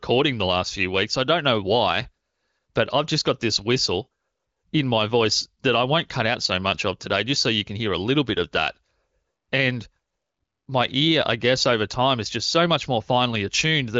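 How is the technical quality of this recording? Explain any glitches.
No glitches or faults can be heard here.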